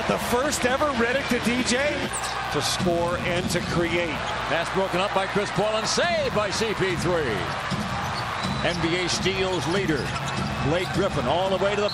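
From start to finish a mains buzz sits under the sound, around 15 dB below it. Sharp switching spikes, such as those from a dimmer, a rectifier or an unshielded line, have leaked in twice per cycle of a 60 Hz supply, spreading harmonics up to several kHz. That gives a steady, raspy edge rather than the smooth, low tone of plain hum, which stays near the fundamental.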